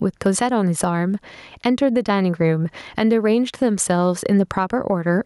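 A speech recording with gain pumping throughout: the level ducks by around 10 dB under each loud syllable, flattening dynamics. This most likely comes from excessive mic gain feeding a fast limiter, and unlike a noise gate, the gaps rise rather than fall silent.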